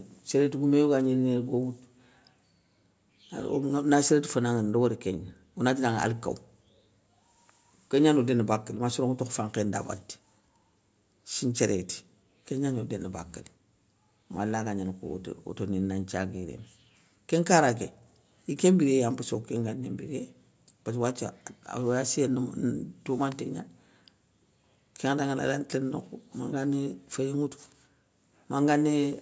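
Nothing's gone wrong in this speech. It's simply gone through a call's microphone processing, which trims the deepest bass and leaves nothing above 8 kHz, just as that path is meant to.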